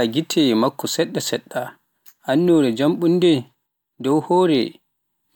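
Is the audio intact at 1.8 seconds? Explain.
No. At 1.8 seconds the speech is inside a stretch of crude rate conversion running from about 0.57 to 4.75 s. The sample rate was changed by plain linear interpolation between neighbouring samples, with no anti-aliasing filter, and the residual pattern fits a step from 48 kHz down to 44.1 kHz. That repeating error forms tones unrelated to the speech, sitting roughly 35 dB below it, heard as a gritty fizz that tracks the louder and brighter sounds.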